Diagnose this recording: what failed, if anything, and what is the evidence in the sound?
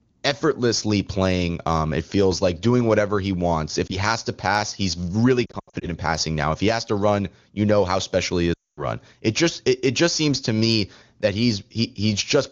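Lost AMR speech frames, a radio-link fault: a brief warble at 3.9 s, stuttering dips from 5.46 to 5.87 s, and a drop to near silence from 8.54 to 8.88 s. The AMR-WB decoder is concealing missing frames by repeating the last good parameters at falling gain.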